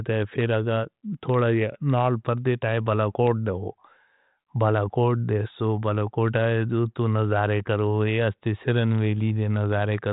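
The speech has come through G.726 ADPCM coding at 40 kbit/s, which cuts off everything above 3.9 kHz and leaves at most faint coding damage, and there is no technical fault to be heard in it.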